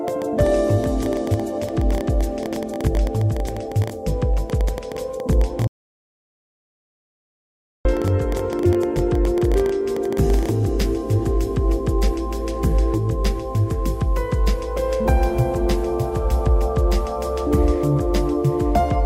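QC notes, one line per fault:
0.08–10.50 s, train of clicks: Something, likely interference from nearby equipment or a faulty connection or power supply, keeps injecting pulses of much the same shape, about 10.4 per second at uneven spacing, roughly a hundred in all. They peak about 5 dB above the sound and tick through pauses too.
5.67–7.85 s, audio dropout to silence: The input was lost for 2.18 s, likely through a disconnected device, failed link or stray mute, while silence kept being written. The sound cuts out to complete silence with no room tone, and whatever played then is gone.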